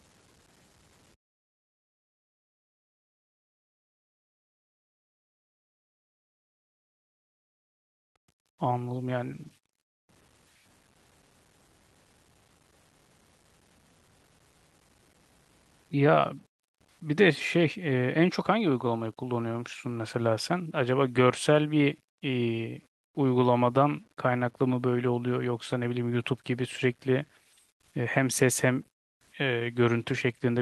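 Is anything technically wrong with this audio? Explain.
Yes. Throughout the whole clip there is grainy distortion that rises and falls with the speech, sitting only around 35 dB below it, so quiet syllables turn gritty and the softest tails sputter or vanish. The likely cause is low bit depth without dither: the signal was truncated to very few levels, roughly 9 bits. Unlike steady hiss, the error tracks the signal. The high-frequency roll-off near 12 kHz comes from the call path's Opus coding.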